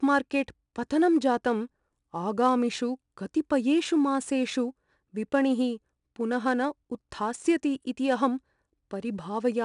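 Speech clip, affected throughout by 4-bit ADPCM compression: each sample is coded as a coarse step from a prediction, leaving a gritty hiss that rises and falls with the speech level. Nothing above 10.6 kHz, consistent with a 22 kHz sample rate near 89 kbps.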